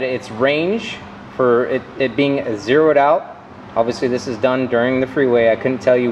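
No technical faults can be heard anywhere in the audio.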